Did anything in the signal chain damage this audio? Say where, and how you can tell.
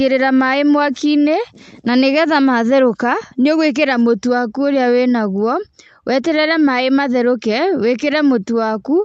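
No, nothing in the chain damaged this speech. It has passed through a WebRTC call path working as intended, and the top end stops at about 8 kHz, which fits the Opus codec's audio bandwidth setting on that call.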